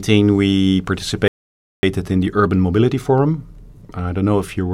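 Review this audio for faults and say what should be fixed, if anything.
A rebuffering stall cuts the speech to silence from 1.28 to 1.83 s, then resumes exactly where it stopped, just before "in the", adding 0.55 s. The player ran dry of downloaded audio and waited. The waveform shows a flat gap; the spectrogram, an empty vertical band. Prevent it with a deeper playback buffer or adaptive bitrate switching.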